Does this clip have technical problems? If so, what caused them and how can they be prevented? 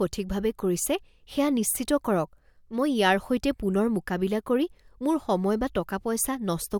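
No, nothing in this speech recording stood out as a technical problem on listening, so there is nothing here that calls for prevention.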